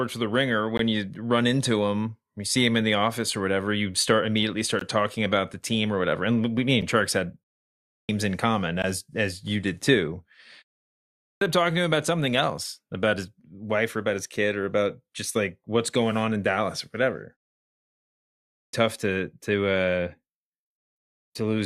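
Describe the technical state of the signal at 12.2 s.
At 12.2 s the speech signal is intact, with no dropout, distortion or other fault.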